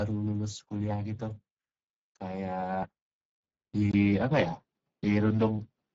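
Speex codec damage runs through the whole speech clip: hoarse, noisy CELP coding, consistent with a rate near 10 kbps, with nothing above 7.7 kHz. From 3.91 s, an input switch to a poorer device is the likely cause of a 20 ms gap, then a band cut above 6.2 kHz, a level shift of a few dB, and a faint new noise floor.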